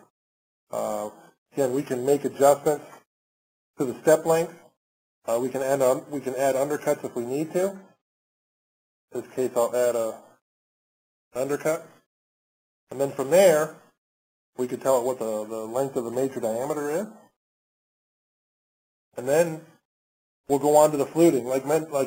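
From 7.76 to 8.98 s the top end turns dull, a channel delay (comb filtering) effect: one channel lags roughly two samples, notching near 10 kHz.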